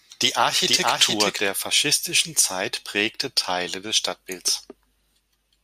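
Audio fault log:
0 to 1.48 s, doubled audio track: the clip opens with the speech already doubled, a second full-band copy trailing about half a second behind and sitting at roughly the same level as the original, so everything seems to land twice. The copy is dry, with no decay or room colour, which is why it sounds like a duplicate rather than an echo. It's likely a slower second capture path or an edit holding two copies out of step, and it cuts off abruptly at 1.48 s.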